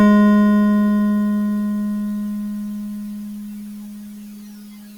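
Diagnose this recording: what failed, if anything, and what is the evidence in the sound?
Nothing failed at any stage: the music shows no audible defect from the wiring through to playback.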